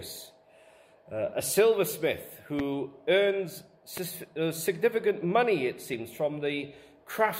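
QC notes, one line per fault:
2.59–2.62 s and 3.97–4.00 s, loud pop: two single sharp pops, each about 25 ms and peaking about 10 dB above the surrounding audio, with the sound continuing underneath. A likely cause is a brief voltage pulse, perhaps static or a switch transient, added to the signal.
5.93 s, compressed frames skipped: the audio jumps forward. Roughly two compressed frames of 24 ms each, about 50 ms of audio, never played.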